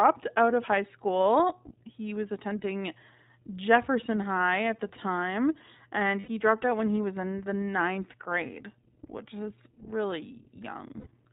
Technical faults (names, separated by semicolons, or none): iLBC codec; lost iLBC frames